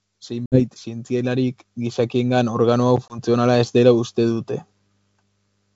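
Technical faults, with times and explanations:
0.27 to 3.37 s, automatic gain rising: the gain control judged the speech too quiet and turned itself up gradually by about 10 dB over some three seconds. Because the control acts on the whole signal, the voice and the room noise underneath it grow louder together. On the waveform the envelope widens steadily across this span. On a spectrogram the speech and the noise floor brighten in step, with no change to the spectral shape.
0.46 to 0.63 s and 3.08 to 3.19 s, packet loss on an ADPCM call: 60 ms of audio drops out in the first event, a few packets' worth, and 20 ms in the second, about one packet. Each gap is filled with silence, leaving a hard-edged hole. When the audio resumes, the G.722 decoder's predictor and step size no longer match the sender's, so the speech returns slightly distorted before it settles. On the waveform each gap is a flat line. 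On the spectrogram each is a clean vertical blank.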